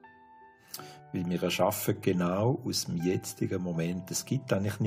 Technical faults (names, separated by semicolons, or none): none